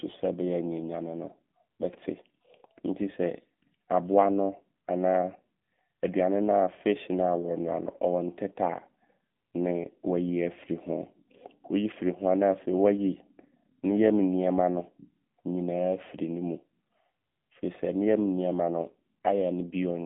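AMR narrowband mobile codec damage runs through the whole speech clip. The audio has been squeezed into a phone-line band of roughly 150 Hz to 3.6 kHz, with nothing above 3.8 kHz, so sibilants and breath lose their air. The codec rebuilds the voice from a vocal-tract model excited by sparse pulses in each short subframe, and the plainly audible buzzy, synthetic edge fits a low 7.4 kbps AMR-NB mode.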